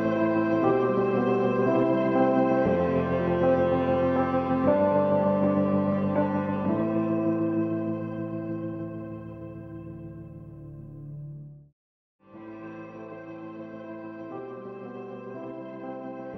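No technical faults can be heard anywhere in this audio. Nothing audible goes wrong at any point along the way.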